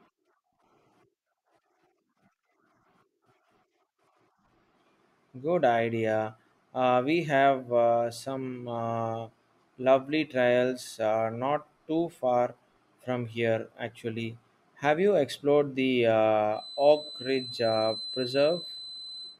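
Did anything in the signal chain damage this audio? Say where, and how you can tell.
Yes. From 16.49 s to the end at 19.39 s, a thin, steady 4 kHz whistle sits well below the speech, swelling and fading slowly in level. This is a feedback whistle, likely from a loudspeaker-to-microphone loop held just at the edge of instability, so one frequency rings on without building.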